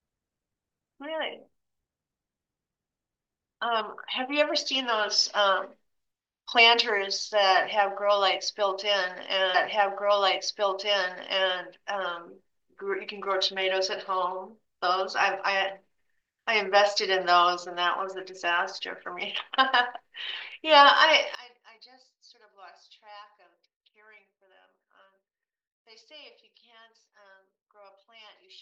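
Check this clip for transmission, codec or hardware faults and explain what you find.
Two faults are audible.

Stream segment repeated, 9.54 to 11.54 s: the player queued the same chunk twice, so about 2.0 s of speech replays after a small blip at the jump back.

One channel inverted, 21.35 s to the end: the speech drops by about 26 dB to a faint residue, likely because one channel's polarity is reversed and the matching content cancels when summed to mono.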